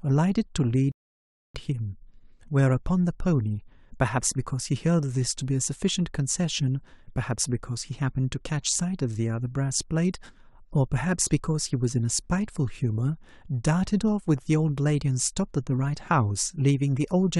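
At 0.92 s the player runs out of downloaded audio and halts until more data arrives: a rebuffering stall. The speech drops to silence until 1.55 s, then picks up exactly where it stopped, with nothing missing but about 0.63 s of dead air inserted.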